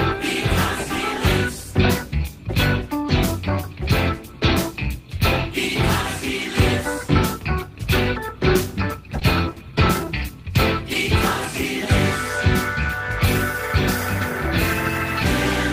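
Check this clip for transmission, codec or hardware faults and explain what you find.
One transmission fault shows up: a short stall from a late packet at about 9.19 to 9.24 s. A packet missed its playout time, the jitter buffer ran dry, and the receiver stretched the preceding sound by 20 ms while waiting. It then resumed from the same point, so nothing is skipped, but playback runs 20 ms later afterwards. The sound hangs briefly with a faint buzz or dip. Unlike a lost packet, no content is cut out or replaced.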